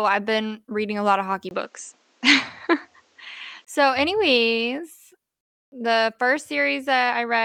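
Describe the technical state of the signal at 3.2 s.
At 3.2 s the speech sounds dull and boxy, with nothing above 8.3 kHz, a level shift of roughly 5 dB and a faint new noise floor. From 1.49 to 3.67 s, between "a lot of hockey" and "so anyways", the input likely switched to a poorer device with a narrower band.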